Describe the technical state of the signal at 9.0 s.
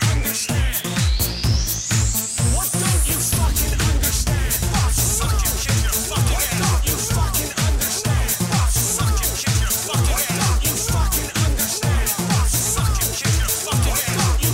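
Nothing is wrong with the signal at 9.0 s; the audio at that point is intact, with no dropout, distortion or other technical fault.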